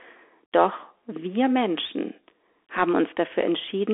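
Bluetooth CVSD headset codec damage runs throughout the speech. The narrowband headset link passes roughly 300 Hz to 3.4 kHz and nothing above 3.6 kHz, which fits a 64 kbps CVSD stream whose one-bit steps lag loud high sounds, leaving scratchy s sounds over granular hiss.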